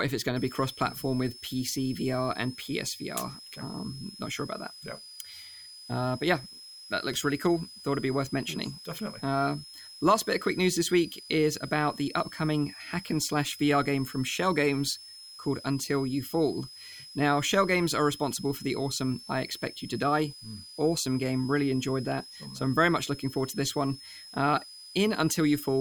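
From about 0.36 s, right after "if it's going", a switching supply whistle sits under the speech to the very end: a thin high tone near 5 kHz, wandering between roughly 4.9 and 5.3 kHz as the supply's load shifts, around 20 dB below the speech.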